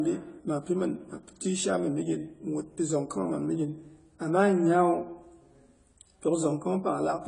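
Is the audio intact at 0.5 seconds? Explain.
No. At 0.5 s the speech sounds dull and smeared, with nothing above 10 kHz, as throughout the clip, likely from AAC compression at a low bitrate, around 24 kbps.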